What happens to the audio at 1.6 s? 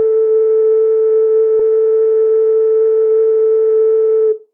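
At 1.59 s the music jumps ahead in a skip ahead: roughly a second is dropped and the two sides join directly, with no silent gap as a dropout would leave. From 1.69 to 4.48 s, jitter buffer speed-up trims short pitch-period slices, so the music runs about 9% fast and loses its steady tempo. Unlike a resampling error, the pitch stays unchanged.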